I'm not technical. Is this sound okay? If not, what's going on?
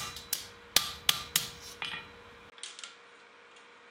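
No. Input switched to a poorer device at 2.5 s: after a tiny gap, the sound turns duller and quieter, likely from recording moving to a lesser microphone.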